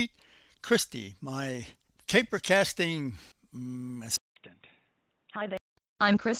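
At 4.16 s, after "my caper casting mm", a 200 ms gap opens. Until 5.77 s the speech is boxy, nothing above 3.8 kHz, about 10 dB quieter, with new background noise about 40 dB below it. Likely an input switched to a poorer device.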